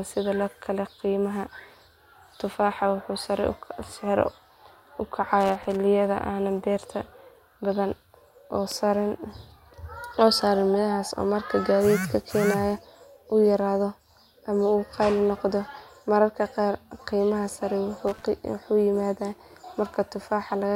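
A speech recording with two bursts of loose connector crackle, from 5.40 to 5.76 s and from 18.08 to 18.24 s. A worn contact makes and breaks, chopping the signal into ragged gaps and pops. The waveform shows jagged dropouts and spikes, and the spectrogram shows irregular broadband vertical streaks.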